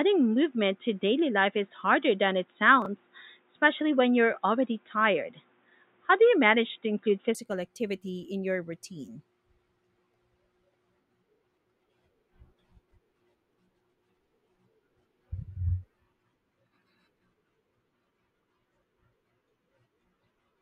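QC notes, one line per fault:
0.00–7.35 s: input switched to a poorer device. The sound is dull and boxy, with nothing above 3.8 kHz. It sits roughly 5 dB off the later level over a faint new noise floor. At 7.35 s it clears with no gap, before "activity in your routine". A likely cause is a narrowband headset or second microphone.
2.82–2.86 s and 12.88–12.92 s: chunks out of order. Each is a brief garbled jolt. A 10 ms chunk plays three chunks late, so the order is scrambled over 40 ms. Nothing is missing, but there are three hard joins.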